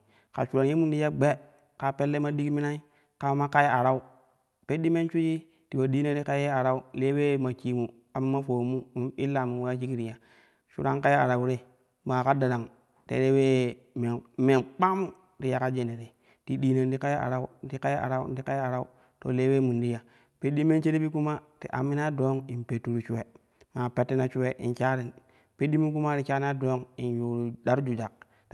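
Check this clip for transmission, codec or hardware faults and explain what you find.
The speech has a transmission timing fault: the sender and receiver clocks disagree, and the receiver keeps correcting for it.

Clock drift between sender and receiver, throughout: the pacing feels subtly unsteady across the whole clip. The sender's clock runs around 4 percent fast, so the jitter buffer keeps overfilling and the receiver has to discard audio to avoid drifting further behind.

Repeated timing corrections, from 0.27 s to 28.45 s: slight hiccups and small jumps recur at uneven intervals, each brief. The receiver trims short pieces, always in the same direction, to absorb material arriving at 104 percent of its own rate.

The call codec's band limit near 12 kHz is audible as a softened top end.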